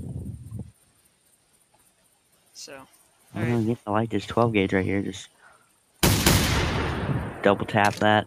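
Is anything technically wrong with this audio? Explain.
Yes. Sound cut by the noise suppressor appears from 0.72 to 2.56 s, 2.86 to 3.33 s and 5.28 to 6.02 s, sinking by about 12, 10 and 12 dB. Mistaking sustained sound for noise, the suppressor dims it and clips decays, yet transients survive, unlike a dropout, which silences everything.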